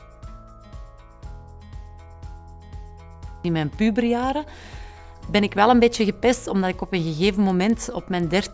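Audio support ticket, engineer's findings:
Regular ticks from 6.8 s to the end, 10 per second, only with signal. Component: sample-rate converter, resampler restarted on every block. Each block converted in isolation, edges lack neighbouring samples. Fits 100 ms blocks, likely a 48 kHz to 16 kHz conversion.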